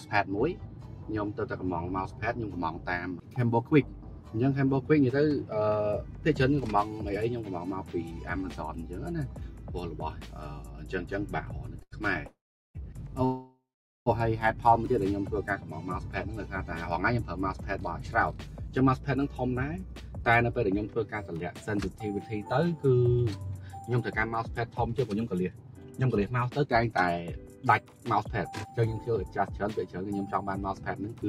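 At 11.83 to 11.94 s there is a short stall from a late packet: the jitter buffer ran dry, and the receiver stretched the last sound for about 91 ms before resuming where it left off. On a spectrogram the final frame's harmonics smear horizontally with a slight buzz or dip, and nothing is lost.

Two call audio freezes follow, at 12.27 to 12.77 s and at 13.25 to 14.08 s. Both were likely caused by packets held up in transit. The sound turns into a fading buzz or hiss, then silence for about 380 ms and 440 ms. The waveform shows a decaying tail and then a flat line before the audio picks up from the same point. These freezes insert roughly 0.5 s and 0.8 s of delay.

Jitter buffer speed-up then pulls some of that delay back out. From 17.14 to 20.88 s the audio runs at 109% speed, and from 25.12 to 28.79 s at 112%, each trimming about 0.4 s. A final stretch runs at 110% from 30.83 s to the end. 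Short pitch-period chunks are cut repeatedly, so the pitch stays the same while the sound feels hurried. On a spectrogram, events look compressed in time while the harmonic spacing stays unchanged.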